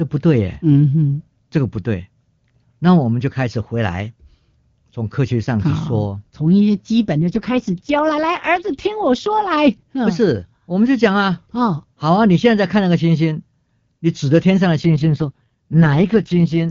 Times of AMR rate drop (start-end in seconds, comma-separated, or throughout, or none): 7.19-9.57, 14.81-16.63